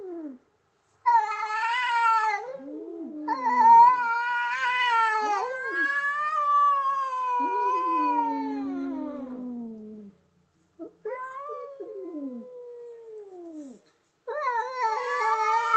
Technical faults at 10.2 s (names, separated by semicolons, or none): none